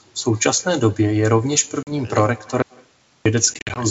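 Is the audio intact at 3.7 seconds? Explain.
No. At 3.7 seconds the sound falls inside a burst of packet loss on an ADPCM call that runs from 3.54 to 3.85 s. About 110 ms of audio is missing, scattered over 220 ms, and the longest single gap is 50 ms. That pattern points to roughly ten lost packets. Each loss leaves a hard-edged hole of silence. The decoder's adaptive predictor and step size then no longer match the sender's, so the audio comes back slightly distorted after each hole before it settles.

The same moment also carries echo with no canceller, which runs through the whole clip. The far end's loudspeaker feeds its microphone, and nothing removes that signal, so the talker's voice returns after a round trip of around 150 ms. The copy sits about 28 dB below the direct sound and is thinner. The G.722 coding at 64 kbit/s is working normally.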